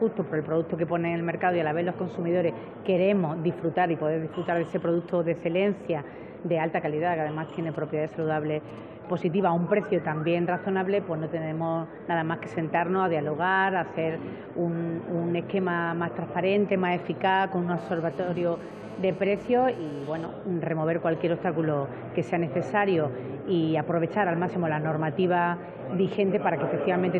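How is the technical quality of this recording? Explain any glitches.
Two bursts of mobile-phone interference break into the recording; beyond those, there's nothing to flag.

From 7.75 to 8.79 s you get GSM signalling bursts: a nearby 2G phone sends a short cluster of radio bursts, and the audio circuitry rectifies them into a galloping dit-dit-dit of short 217 Hz buzzes, sitting roughly 20 dB under the programme.

Then from 17.78 to 20.25 s comes a steadier GSM phone buzz, the pattern of a phone in an active call pulsing 217 times a second. The rectified pulses give a hard, raspy 217 Hz buzz full of harmonics, about 22 dB below the signal and unrelated to it.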